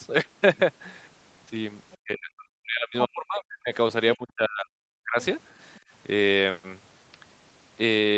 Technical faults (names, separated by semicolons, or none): other side's voice leaking through; speech suppressed in double talk; background gated by the echo canceller